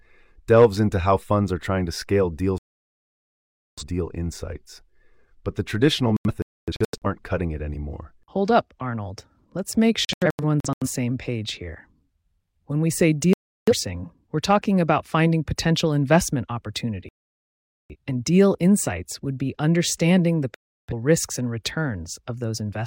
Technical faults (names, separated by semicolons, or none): digital broadcast dropout